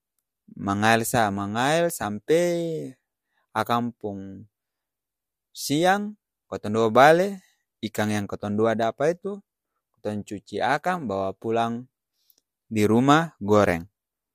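No technical faults are audible.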